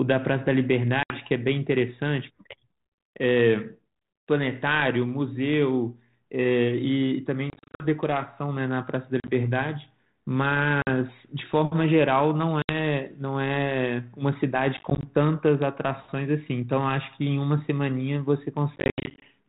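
Hard-edged silent holes break the speech at 1.03, 7.5, 9.2, 10.82, 12.62, 14.77 and 18.76 s, the longest being a scattered 460 ms stretch near the end. Each is followed by speech that returns slightly distorted. This is packet loss on an ADPCM call: the G.726 decoder's predictor and step size fall out of step with the sender's and take some tens of milliseconds to realign.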